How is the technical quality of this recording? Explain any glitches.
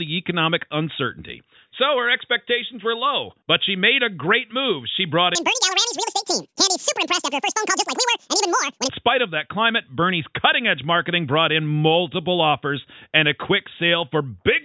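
One glitch stands out. A wrong sample rate fault runs from 5.35 to 8.89 s. The samples are replayed at twice their intended rate with no conversion, so everything runs at double speed and a full octave higher. That fits 8 kHz material played back at 16 kHz. The sound turns high-pitched and rushed until it snaps back.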